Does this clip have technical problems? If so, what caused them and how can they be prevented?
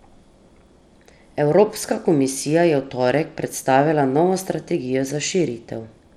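Yes. The speech throughout has dull, flickering treble and gritty noise, likely from Bluetooth SBC compression at a low bit pool, which fits about 96 kbps. Use a wired connection or a higher-quality Bluetooth codec.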